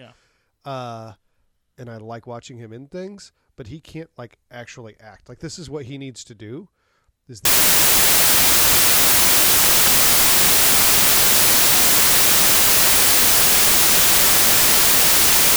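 Speech that turns, from 7.45 s to the end, into loud, harsh broadband noise from samples built from the wrong bytes. Unlike clipping or hiss, it comes from the bytes of each sample being put together wrongly.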